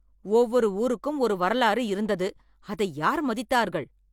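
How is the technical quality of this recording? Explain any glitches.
No glitches or technical faults.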